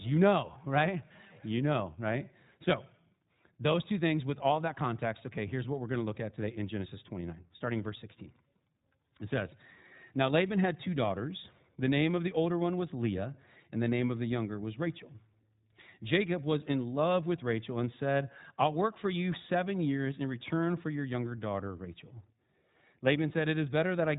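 Speech passed throughout through the iLBC codec, which fits its 15.2 kbps, 20 ms frame mode, so nothing above 3.8 kHz survives and the voice sounds plainly rough and synthetic.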